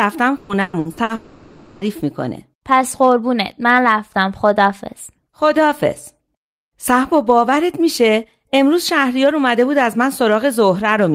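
A speech clip with repeated packet loss (robotic sound) from 0.37 to 1.12 s: about five short holes, the longest 120 ms, patched by repeating the last sound, so over half that stretch is synthetic and choppy. A spectrogram shows smeared, stripe-like harmonics; the waveform shows repeated copies of the same short segment. From 1.15 to 1.84 s comes what is likely a long network dropout: 0.66 s of concealment continues the last sound as a fading buzz rather than true silence, appearing as a blurred, decaying band before normal speech texture resumes.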